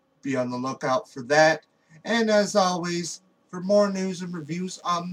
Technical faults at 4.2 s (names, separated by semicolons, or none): DECT cordless phone buzz